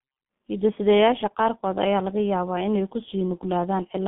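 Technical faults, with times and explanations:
Throughout, G.723.1 codec: speech muffled and hoarse, nothing above 3.7 kHz; roughly 6.3 kbit/s with 30 ms frames and slow voice-model updates blurs consonants heavily.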